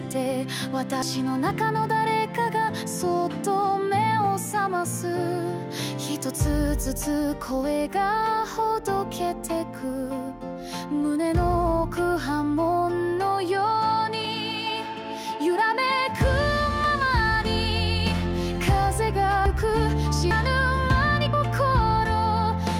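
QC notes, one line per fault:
1.02, 14.25, 19.46, 20.31, 21.33 s: likely dropped buffer (overrun). The sound jumps ahead with no gap, about 100 ms lost each, nearer 150 ms at 19.46 s.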